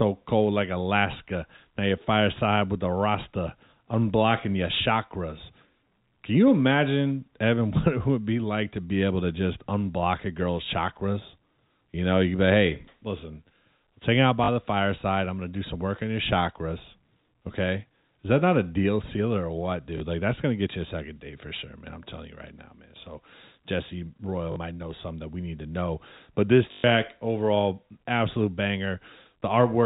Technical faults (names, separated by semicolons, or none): packet loss with last packet repeated